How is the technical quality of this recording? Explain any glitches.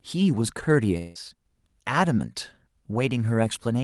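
The speech carries one glitch over a call codec whose high end stops around 12 kHz. From 0.97 to 1.18 s, a likely long network dropout: the receiver stretches the last sound into a fading buzz, never silence, unlike a brief click-length packet loss.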